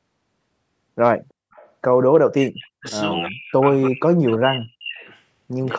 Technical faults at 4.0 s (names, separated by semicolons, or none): speech suppressed in double talk